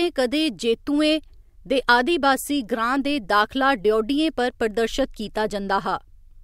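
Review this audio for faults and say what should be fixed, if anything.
Nothing here needs fixing, since no technical faults turn up anywhere in this speech recording.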